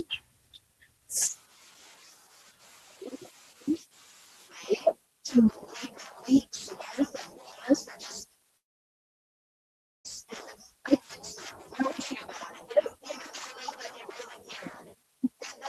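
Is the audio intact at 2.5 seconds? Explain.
Yes, the audio is intact at 2.5 seconds, with no fault to be heard at that moment.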